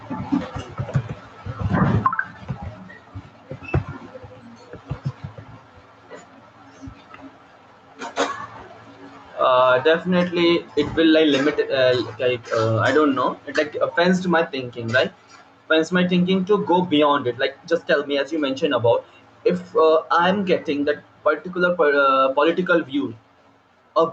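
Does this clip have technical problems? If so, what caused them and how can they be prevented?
Yes. Throughout the speech the level pumps up and down, a breathing effect of roughly 10 dB. Loud and quiet passages sit unnaturally close in level, so the whole recording sounds squashed. This is gain pumping, likely caused by the microphone gain being set far too high, so a fast limiter or compressor has to clamp down hard on each loud sound and then release in the gaps. The call codec's band limit is audible as well, with little content above about 8 kHz. To prevent the pumping, lower the microphone input gain so that the limiter rarely has to act.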